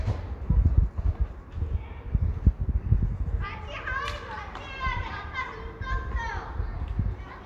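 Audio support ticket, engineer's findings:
Listened through the whole capture and nothing stood out as a fault, so there's nothing to chase on this one.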